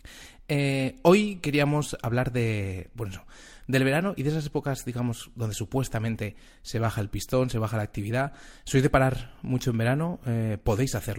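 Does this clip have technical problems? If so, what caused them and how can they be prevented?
No, this recording has no technical problems to report.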